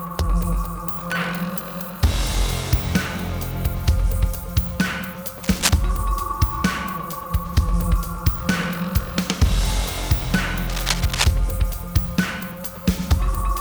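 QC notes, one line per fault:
5.43–5.79 s and 10.69–11.31 s: cable scratch noise. Two short bursts of dense, ragged crackle sit only a few dB below the sound, heard as scratching over it. This is likely a worn cable or connector being moved, its contact resistance fluctuating rapidly.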